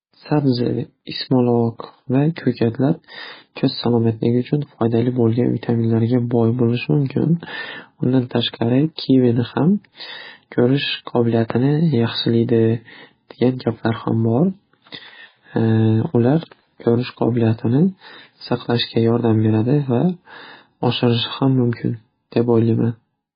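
Throughout, heavy MP3 compression likely starved the encoder of bits, which fits a 16 kbps stream, so nothing survives above 5 kHz and the speech turns watery and smeared.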